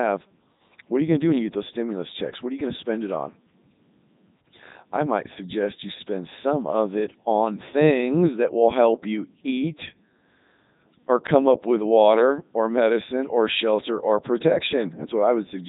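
Throughout, the speech passes through a Codec 2 vocoder, consistent with its top 3.2 kbit/s mode, resynthesised from pitch and envelope, so it sounds robotic, buzzy and cut off above 3.8 kHz.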